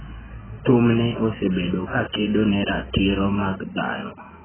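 Throughout, the speech stops dead above 3.1 kHz and sounds dull, smeared and warbly, likely from heavy AAC compression at a very low bitrate.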